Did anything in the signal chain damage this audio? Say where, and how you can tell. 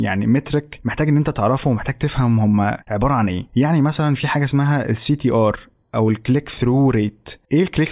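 No, nothing in the chain has damaged this recording.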